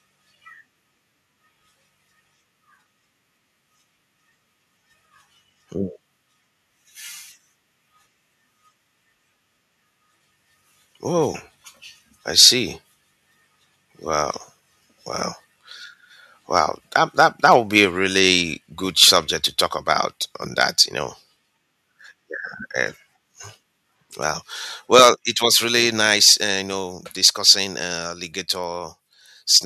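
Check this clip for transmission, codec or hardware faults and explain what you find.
There are two problems here, and they're linked: the speech keeps distorting on its loudest peaks, and twice the level then drops suddenly.

Microphone overload shows up at 12.39–12.49, 16.56–16.60, 16.95–17.84, 19.02–19.17 (right after "a really good"), 20.61–20.82, 24.94–25.09, 26.27–26.32 (after "it was really") and 27.25–27.52 (after "uh you know"). The input gain was likely set too high, so peaks overshot the converter's ceiling by about 2 to 8 dB. Their tops get sheared flat, which gives those syllables a harsh, crackly edge. It's worst around 25.0 s, where a noticeable share of samples clip.

Microphone volume stepped down at 17.85 and 25.14, each time right after a clipped stretch. The call software likely pulled the input gain down in one jump, by about 2 dB and then about 5 dB. Speech and background fall in level abruptly.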